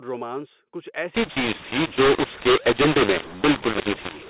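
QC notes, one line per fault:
1.15–4.30 s, mu-law and A-law mixed up: mu-law samples decoded as A-law scramble levels, so speech turns harsh and pauses fill with noise.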